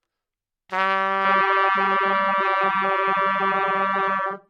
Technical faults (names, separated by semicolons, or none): adaptive stream at a lower bitrate